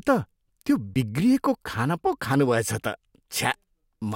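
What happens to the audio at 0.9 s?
At 0.94 s the speech hits an underrun with a held sample: the output buffer runs dry for about 18 ms, and the converter freezes on its last value, so the waveform goes flat and the sound stops. Roughly 20 ms of live audio is skipped before playback resumes.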